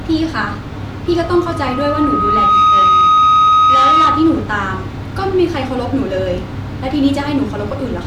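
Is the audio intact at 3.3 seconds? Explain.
No. At 3.3 seconds the clip is inside a loudspeaker feedback squeal running from 1.06 to 4.53 s. The microphone picks up its own loudspeaker, and the loop gain tops unity near 1.3 kHz. That lets a pure tone swell over roughly a second and a half to sit about 10 dB above the speech.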